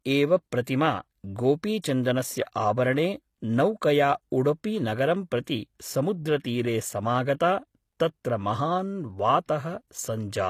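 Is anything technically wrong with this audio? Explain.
Yes. The speech carries audible damage from low-bitrate compression, most likely HE-AAC compression at a rate that fits around 24 kbps. The codec keeps only the lower spectrum and regenerates the treble by copying lower bands upward, so harmonics above the crossover no longer align. Sibilants sound gritty and metallic. A spectrogram shows repeated, blocky texture above the crossover.

Pre-echo occurs at 5.44–5.47 s, 6.42–6.45 s and 9.46–9.49 s, each about 30 ms long. Quantisation noise sized for a sharp onset spreads back across its transform block into the quiet just before it, adding a brief hiss and softening the attack. A waveform shows a noise smear leading each transient.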